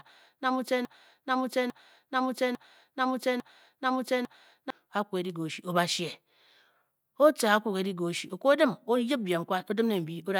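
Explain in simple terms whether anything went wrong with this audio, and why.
A broken-record loop runs from the start until 4.70 s: one 0.85-second piece of speech repeats back to back, five times. The player or stream likely stalled and kept replaying its last fragment, so the speech meant for those seconds is lost.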